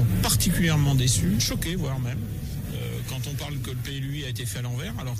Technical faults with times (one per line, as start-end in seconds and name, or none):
none